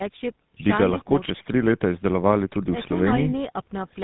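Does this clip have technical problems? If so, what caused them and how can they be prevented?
Yes. Tandem speech coding runs throughout. GSM full rate coding was decoded to G.711 mu-law and then coded with GSM full rate again. The second coder worked on the first one's errors. The speech sounds rough, muffled and warbly, with nothing above 3.8 kHz. Keeping one codec end to end, without transcoding at each link, prevents this.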